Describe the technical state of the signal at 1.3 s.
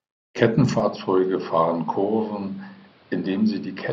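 The speech at 1.3 s falls within an input switched to a poorer device, running from 0.8 s to the end of the clip. The recording most likely changed microphones without a gap. The new path carries nothing above 5.6 kHz, so the speech sounds dull and boxy, slightly quieter, and carries a faint new background noise. A spectrogram shows the upper band cut off flat at 5.6 kHz from 0.8 s onward. The waveform steps down by roughly 5 dB, and a noise floor about 30 dB below the speech fills the pauses.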